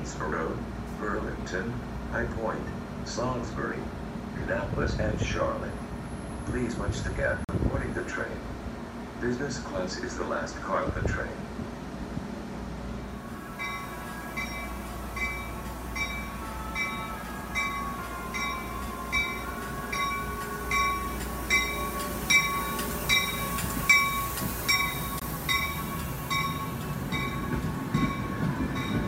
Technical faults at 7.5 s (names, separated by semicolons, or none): block of digital silence